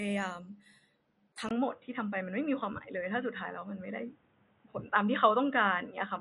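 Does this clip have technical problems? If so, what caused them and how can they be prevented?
Yes. Throughout, the audio is dull and gurgling from likely MP2 compression at a low rate, around 48 kbps. A spectrogram shows a hard ceiling at 11.3 kHz with flickering upper bands. Encoding at a higher bitrate, or with a modern codec, prevents this.

At 1.49 s the input was likely switched to a poorer device. A 20 ms gap appears in the waveform, and from there to the end nothing reaches above 3.8 kHz. The level shifts by about 5 dB, and a new noise floor sits roughly 40 dB down. Locking the recording input to one device stops this.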